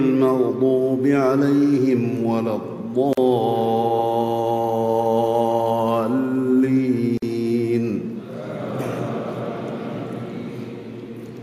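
Separately encoded pieces, joined every 4 s without trimming encoder delay and end padding, leave a gap at each join: about 44 ms at 3.13–3.17 s and 49 ms at 7.17–7.22 s. The sound drops out with smeared edges, then resumes where it stopped.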